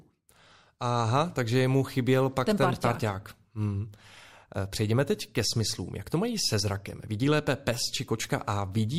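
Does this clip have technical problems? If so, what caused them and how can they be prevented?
No, there are no technical problems to hear in this speech clip. Nothing in it needs a cause traced or a preventive step.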